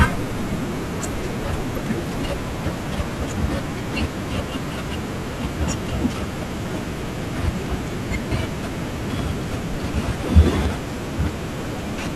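At 1.75 to 1.78 s the speech is broken by about 30 ms of damaged data in the compressed stream. Bytes in that stretch were lost or corrupted, so the decoder misreads the affected frames, loses sync and hunts for the next valid frame header before normal speech resumes.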